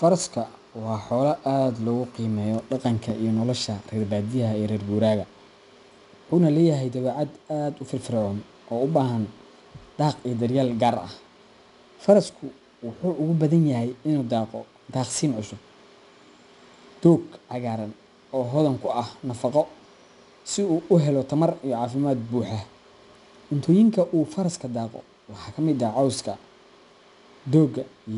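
From start to end the speech carries 4-bit ADPCM compression, plainly audible as a gritty hiss that rises and falls with loudness, with added roughness on sharp onsets where the adaptive step size lags behind. Each sample is coded as a coarse 4-bit difference from a prediction, so the error tracks the signal. Nothing sits above about 10.6 kHz, pointing to a rate near 89 kbps. A spectrogram shows level-following noise filling the gaps between harmonics and a hard ceiling at 10.6 kHz.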